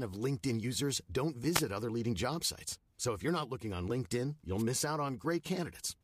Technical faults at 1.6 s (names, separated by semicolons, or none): wireless microphone noise hit